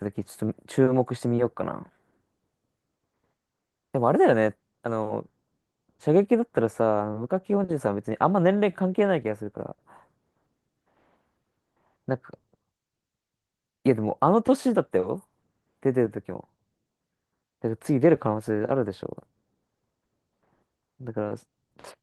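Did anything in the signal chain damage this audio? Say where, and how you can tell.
No, nothing in the chain has done any harm here; the speech comes through the Opus voice compression at 20 kbps in hybrid mode with the full band intact, and there's nothing to point a finger at.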